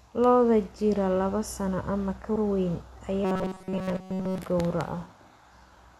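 At 2.35 s a short stutter is heard: the same 78.4 ms of speech plays a second time. This is repeated frames. A block that fits a run of three compressed frames was delivered twice, so the clip runs 78.4 ms longer.

From 3.25 to 4.38 s, right after "ka weyn", the speech turns into a rigid, metallic buzz pitched at 188 Hz that only loosely tracks the syllables, throughout the stretch. This is robotic sound from repeated short buffers, likely caused by new audio arriving too seldom so that the last 5.3 ms was looped while the real audio was skipped.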